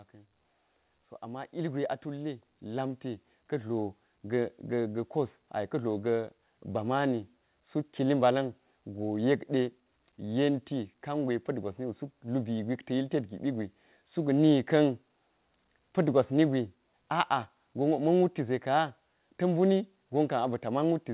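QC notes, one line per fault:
0.61–6.61 s, automatic gain rising: the level control judged the input too quiet and raised its gain by about 10 dB over six seconds, so the speech and background noise swell together in a slow, steady ramp rather than a sudden jump.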